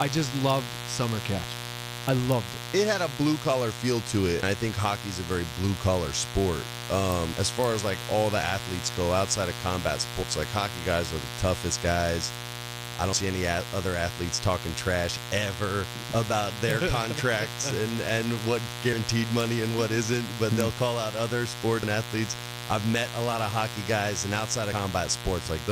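A steady, raspy buzz sits under this speech recording from start to finish, loud enough to be roughly 10 dB below the talker rather than buried beneath them. This is mains buzz on a 60 Hz supply. Sharp switching spikes from something like a dimmer, a rectifier or an unshielded lead enter the signal twice per mains cycle, so the interference is a dense stack of 60 Hz harmonics reaching into the kilohertz range instead of a smooth hum. Over that buzz come violent, splintering cracks, far harsher than ordinary clipping, at 0.02, 0.50, 2.09 to 2.32, 7.12, 7.64 (just before "as like all the"), 16.71 (just after "talking trash ever about"), 19.41 (just before "and what isn't but") and 20.61 s. These are integer overflow. Each time a peak or gain stage exceeded the largest value the integer format could hold, the sample wrapped around to the opposite extreme instead of being limited, throwing the waveform across its full range. 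The 2.09 to 2.32 s stretch was pushed about 1 dB past that limit and the crack at 20.61 s about 2 dB, which makes those two the most prolonged and the most severe. At 4.43 s the sound jumps abruptly, with about a tenth of a second simply gone and the two sides butted together with no gap. This is audio missing between chunks, likely caused by a recorder or processor working in 3-second blocks and dropping a small piece while closing one block and opening the next.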